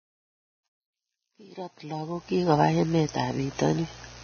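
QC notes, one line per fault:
Throughout: Vorbis compression. The speech sounds heavily grainy and hissy, with roughened tones, smeared consonant attacks and nothing above 6.5 kHz. The likely cause is a low-quality Vorbis encode, with a damage level that fits a bitrate of around 13.5 kbps. Vorbis draws a smooth spectral outline and quantises the detail on top of it. At this setting the treble is cut off, and the fine detail that remains is coded so coarsely that it turns into noise of similar energy.
0.00–2.54 s: truncation distortion on a fade. The quiet fade at the start sounds gritty and stepped, and it is worst from 0.00 to 2.17 s, where the level sits lowest. The gain stage driving the fade kept too few bits and added no dither, which fits a 10-bit word length. At these low levels the waveform spans only a few quantisation steps, so it becomes a blocky staircase, and that staircase adds distortion that follows the signal.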